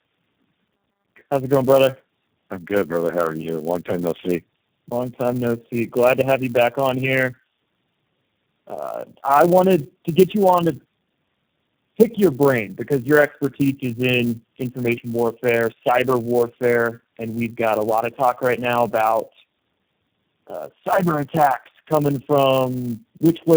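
From start to finish, the speech shows tandem speech coding: it passed through four speech codecs in a row (AMR-NB, G.729A, CVSD, then G.729A again), each re-encoding the previous one's damage. The result is rough, muffled and warbly, and a spectrogram shows nothing above 4 kHz.

Also throughout, a filter restarted on every block resets to silence at each block edge, producing a 200 Hz buzz that rises and falls with the speech level. On a waveform, small transients recur every 5 ms; a spectrogram shows evenly spaced vertical striations.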